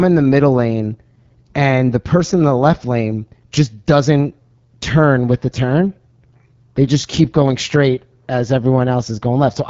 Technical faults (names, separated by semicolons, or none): AMR wideband (HD Voice) codec